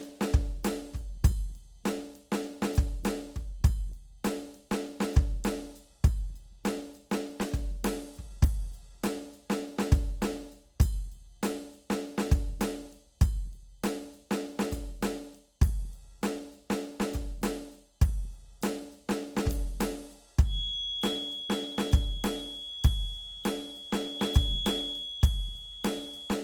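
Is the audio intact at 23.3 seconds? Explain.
No. A feedback whistle runs from 20.42 s to the end of the clip, a thin steady tone at 3.4 kHz roughly ten decibels under the music. It is likely a loudspeaker-to-microphone loop held just at the edge of feedback. On a spectrogram it shows as one bright horizontal line at 3.4 kHz, swelling and fading slowly in strength.

Opus compression is also audible throughout, including at 23.3 s. The music's tones sound grainy, rough and noisy, likely from Opus in its CELT music mode at a low rate, which fits roughly 24 kbps. Band energy is kept but detail is filled with noise. A spectrogram shows blurred, speckled texture reaching up to about 20 kHz, without clean harmonic lines.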